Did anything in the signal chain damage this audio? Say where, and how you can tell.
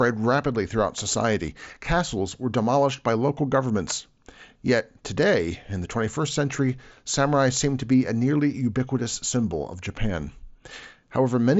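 No, nothing damaged this audio.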